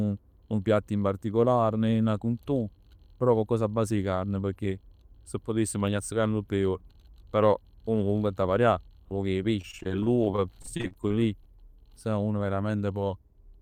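Speech, with repeated packet loss (robotic sound) from 9.61 to 11.49 s, just after "poc 'e": packets kept arriving late or not at all, and each hole, none longer than 33 ms, was bridged by stretching the previous sound. Well over a dozen such patches leave the speech choppy, with pieces missing.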